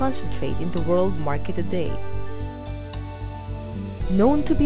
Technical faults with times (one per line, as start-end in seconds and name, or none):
none